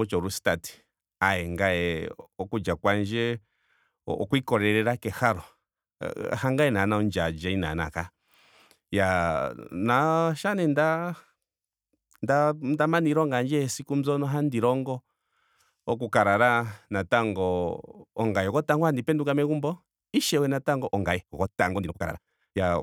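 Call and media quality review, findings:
Time-stretched section, 20.86 s to 22.83 s. Speech pace jumps abruptly to about 1.85x while pitch holds. Sound turns rushed. Likely a time-compression stage fitting audio to a length by dropping short pieces to keep pitch.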